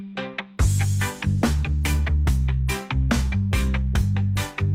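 No technical faults can be heard anywhere in this audio.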